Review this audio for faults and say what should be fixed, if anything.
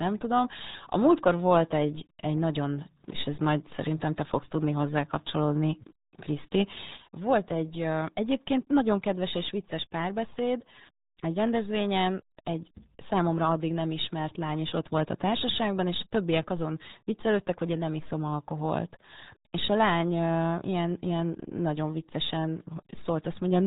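The speech was passed through the RealAudio 14.4 codec, the dial-up era RealAudio 1 format, for the whole clip, and the heavy coding damage fits a bitrate of about 8 kbit/s. At that rate the codec discards everything above 3.8 kHz and rebuilds the rest from a coarse model. Consonants lose their edge and the voice sounds muffled, with a gargly, watery texture all the way through. To prevent it, keep the original recording and re-encode from it with a modern wideband codec at an adequate bitrate.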